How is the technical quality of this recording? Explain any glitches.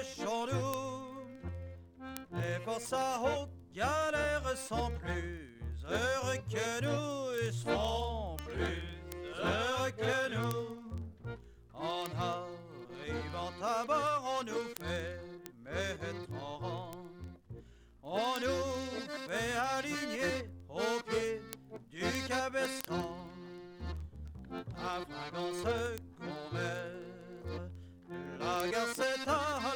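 Word clock ticks run through the whole recording, from 0.12 s to 29.72 s, about every 0.04 s. That is roughly 25 sharp ticks a second, several hundred in all. The receiving device's clock is off from the sender's by roughly 500 ppm, so one sample slips at each crossing. On a spectrogram, the ticks show as evenly spaced thin vertical lines. In the waveform, each appears as a step or discontinuity.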